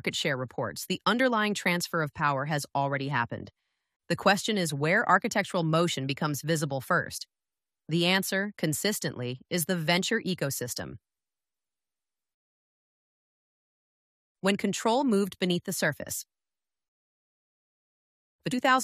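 At 18.52 s, just before the end of the clip, there is a brief burst of damaged data in a compressed stream, lasting only about 16 ms. A stretch of the encoded data there is corrupted, so the decoder cannot interpret the affected frame correctly, loses its place in the stream and has to resynchronise on the next valid frame header. The result is a short, sharp chirp or blip that breaks abruptly into the audio before normal playback resumes.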